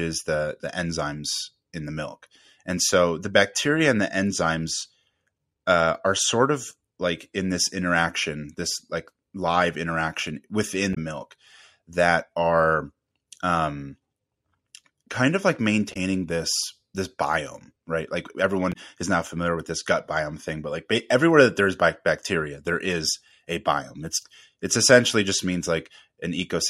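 At 10.91 to 10.98 s, after "this like live interaction" and before "milk that are um", the speech breaks into a short glitch from damaged data in a compressed stream. The decoder misreads corrupted frames, loses sync and hunts for the next header. The same fault recurs at 15.90 to 15.97 s, after "kind of like", and at 18.69 to 18.76 s, just before "is now familiar with". Each lasts about 70 ms.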